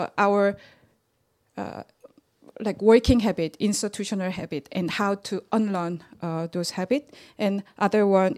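Nothing goes wrong anywhere in this stretch of speech, so there's no technical fault to point to at any moment.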